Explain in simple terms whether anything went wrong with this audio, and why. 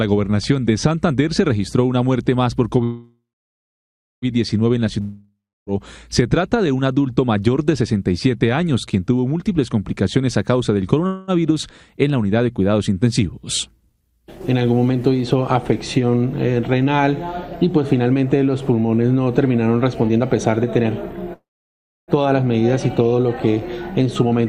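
Packets carrying the audio were likely held up on the network three times, so the receiver ran out of sound to play. Each time it stretched the last bit of sound into a fading buzz. This is a call audio freeze. The first runs from 2.83 to 4.25 s, about 1.4 s, with roughly a second of silence. The second, from 11.07 to 11.31 s, is a brief 0.21 s hiccup with no silence. The third, from 21.34 to 22.11 s, lasts 0.74 s, mostly silent. Afterwards the audio picks up exactly where it stopped, so nothing is missing. It is just pushed later.

From 5.01 to 5.70 s, a long network dropout likely meant some audio never arrived at all. The receiver again filled the gap with a fading buzz that ends in about 0.3 s of silence. When the sound returns, about 0.66 s of it has been skipped over and is lost for good.

From 15.72 s to the end at 24.46 s, the receiver was holding more delayed audio than it wanted. 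To catch up it trimmed many tiny slices out of the sound, about 0.7 s in total. This is a jitter buffer speed-up. The audio plays roughly 7% faster without any change in pitch, so it sounds slightly hurried. The freeze at 21.34 s lands inside this stretch.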